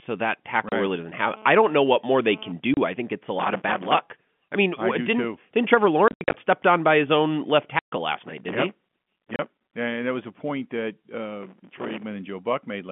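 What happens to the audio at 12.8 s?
Nothing goes wrong at 12.8 s; the sound there is intact, still carried through the narrow band of the G.711 telephone coding.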